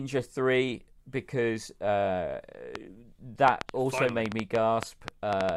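From 2.75 s, just after "because uh", to 5.5 s, a train of clicks runs at about 5.1 per second, irregularly spaced, around fifteen similar pops well above the speech, likely from interference. Unlike random crackle, the pops share one shape.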